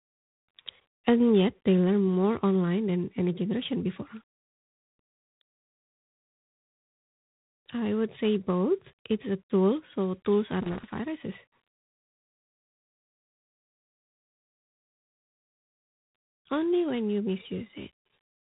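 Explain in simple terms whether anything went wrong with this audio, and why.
Two things went wrong. Throughout, the speech has G.726 ADPCM damage: a harsh, rasping hiss that swells and fades with the voice, and nothing above about 3.9 kHz. Unlike steady background noise, this hiss rides along with the speaking and drops away in pauses, because this phone-style coding stores only rough guesses of each change.

There is also loose connector crackle, from about 0.80 to 1.02 seconds and again from 10.57 to 10.99 seconds, right after "a tool so tools". These are short, irregular bursts of scratching where a bad contact kept breaking. Unlike the codec hiss, they come and go abruptly instead of following the voice.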